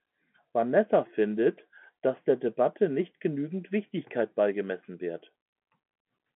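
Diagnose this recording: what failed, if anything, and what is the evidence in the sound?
Nothing has failed here; it's just speech coming down an ordinary telephone line with G.711 coding, so the sound stops at about 3.8 kHz, and that narrow band is simply how the phone system carries it.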